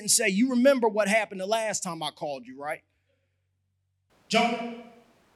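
At 4.10 s the speech abruptly turns roomy and hollow, with thinner bass, and stays that way to the end of the clip. The level drops by about 5 dB and background noise rises to roughly 35 dB below the speech. This is likely a switch to a distant microphone: the close microphone's signal dropped out, leaving a pickup farther from the talker that captures more room reflection and ambient noise.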